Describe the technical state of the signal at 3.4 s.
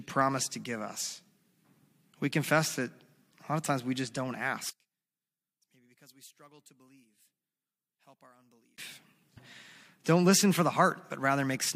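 At 3.4 s the speech signal is intact, with no fault audible at that moment.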